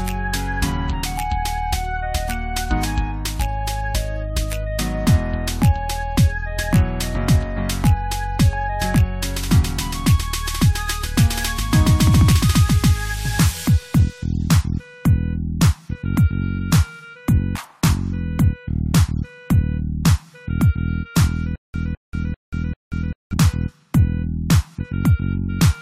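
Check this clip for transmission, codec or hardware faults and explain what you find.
One fault is audible: a stutter with silent gaps from 21.56 to 23.33 s. A 209.5 ms fragment plays four times, each followed by 183 ms of digital silence, giving a 393 ms cycle. This is likely a stalled player or stream replaying its last buffer on each retry, so the audio for that stretch is lost. The waveform shows identical blocks separated by flat silent gaps, and the spectrogram shows matching vertical bands with blank columns between them.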